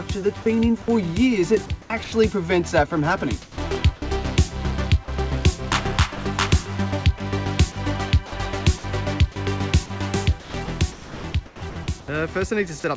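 The sound turns choppy at 0.42–0.88 s, 1.66–2.12 s, 3.42–4.02 s, 7.72–8.84 s and 9.86–12.08 s. Within these stretches, between 100 and 880 ms of audio is filled with comfort noise. The cause is likely sound chopped by the voice detector, which repeatedly switched transmission off and on. Twice the sound briefly gives way to steady noise, at 5.04–5.08 s and 6.16–6.18 s, each losing about 20 ms. This is likely sound dropped by the voice detector, which mistook quiet material for background. Over the call path, which sounds like G.722, nothing is heard above 8 kHz.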